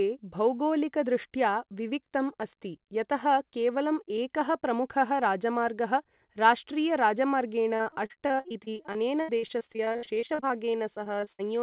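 From 7.76 s to 11.41 s, repeated packet loss gives the speech a robotic sound. Dozens of short holes follow each other, the longest about 79 ms. Each is patched by repeating the last sound. Over a quarter of the stretch turns choppy.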